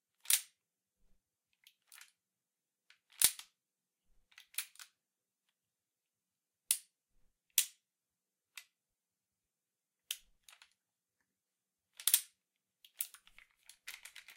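No technical faults are audible.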